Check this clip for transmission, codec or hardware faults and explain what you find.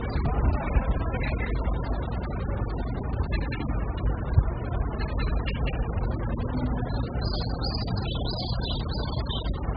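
One codec fault runs through the whole clip. Heavy AAC compression likely causes it: nothing is present above 5.1 kHz, and the remaining band sounds dull, smeared and warbly. That fits AAC-LC starved to a very low bitrate, around 8 kbps, where the coder lowers its cut-off and coarsely quantises what remains. A plain low-pass filter would leave the lower band clean. Here the fizzy, shifting texture of holes and substitute noise marks codec damage.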